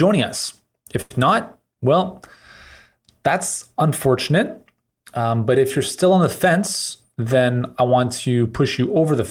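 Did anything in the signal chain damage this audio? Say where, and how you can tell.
Yes. A short stall from a late packet occurred in the network jitter buffer. From 1.01 to 1.12 s, just before "not well", one sound holds about 89 ms while the receiver waited.

A jitter buffer speed-up follows at 7.09 to 7.96 s. Speech runs about 9% faster at unchanged pitch. Roughly 70 ms of pitch periods were trimmed to cut delay.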